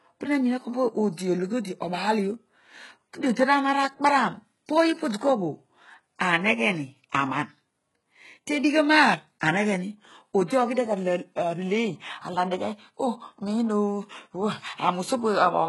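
From start to finish, the speech has nothing above about 11.4 kHz, and the top end that is there sounds rebuilt rather than real, with s sounds coming out gritty, metallic or a bit lispy. That's likely HE-AAC compression, and the heavy damage fits a very low bitrate around 12 kbps. The codec keeps only the lower spectrum and fakes the treble by copying lower bands upward under a rough envelope, so the harmonics don't line up across the crossover.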